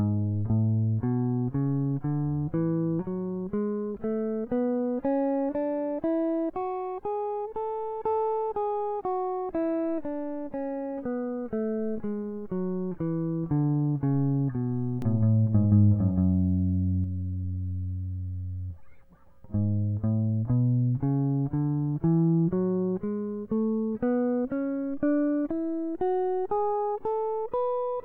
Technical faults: doubled audio track

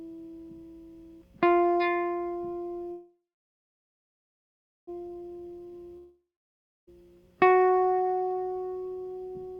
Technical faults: call audio freeze; jitter buffer slow-down; long network dropout

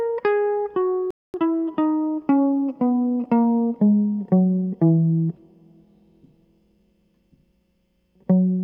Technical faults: playback stall; time-compressed catch-up

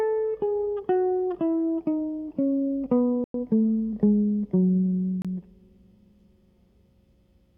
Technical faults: Bluetooth stall

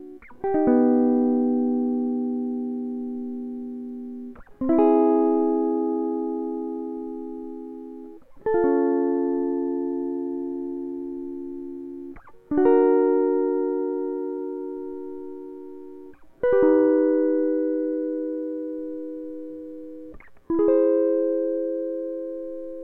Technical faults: none

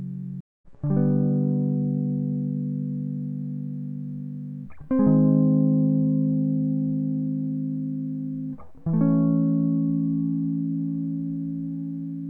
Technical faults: stream reconnect

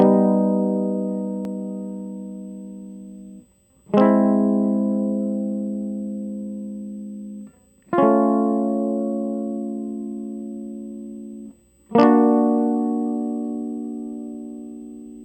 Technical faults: USB whine

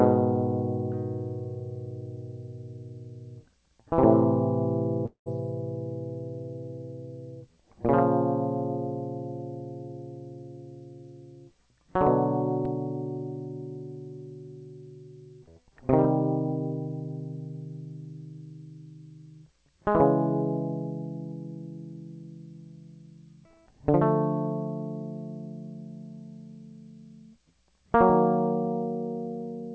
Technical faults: long network dropout

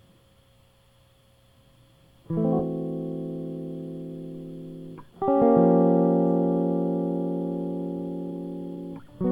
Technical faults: skip ahead; jitter buffer speed-up

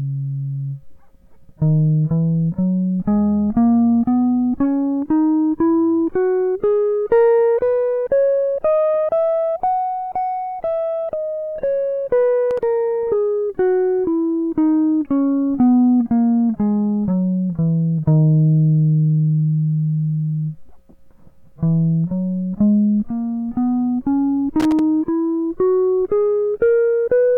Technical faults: loose connector crackle

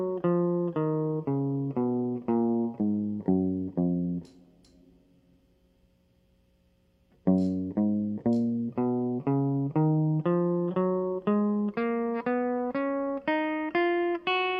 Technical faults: none

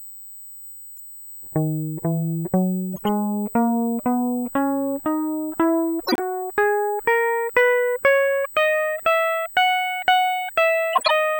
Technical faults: USB whine; corrupt frame decoded; corrupt frame muted

